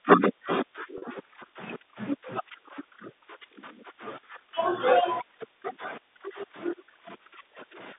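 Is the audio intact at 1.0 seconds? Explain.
No. From 0.98 to 1.02 s, 40 ms of audio was lost in transit, which fits two 20 ms packets, and the receiver filled the gap by repeating the last pitch period. This packet loss with pitch repetition briefly makes the speech sound held and buzzy.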